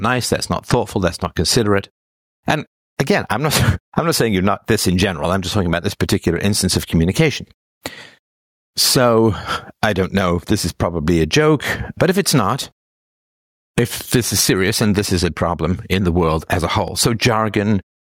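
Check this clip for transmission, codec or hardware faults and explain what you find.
Two faults stand out: gain pumping across the whole clip and a single DC step near the end.

Gain pumping runs throughout, with a level swing of around 15 dB, leaving everything squashed. The likely cause is input gain set far too high, with a fast limiter or compressor clamping down on each peak.

The DC step comes at 16.88 s as a low thump while the sound carries on unchanged. The waveform's zero line jumps to a new offset, which then drains away along a slow curve consistent with a 5 Hz high-pass filter.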